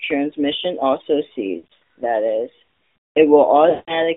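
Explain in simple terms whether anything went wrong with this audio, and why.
The call went through an AMR narrowband mobile codec, the speech compressor used on older 2G and 3G phone networks. It keeps only a narrow slice of the sound, roughly 250 Hz to 3.4 kHz, and rebuilds the voice from a simplified model of the throat and mouth. Throughout the clip, that loss of detail is plainly audible: the speech sounds thin, muffled at the top and somewhat buzzy and synthetic, as if heard down a phone line.

There are also lost AMR speech frames, where radio errors damaged small chunks of the signal and the phone had to guess. Between 1.58 and 1.76 s, just before "that is", about 200 ms of sound went missing in scattered bits spread over a third of a second, the longest gap about 80 ms. You hear the voice dip and warble. From 3.70 to 4.02 s another 180 ms dropped out, so the sound smears, fades away and returns rough.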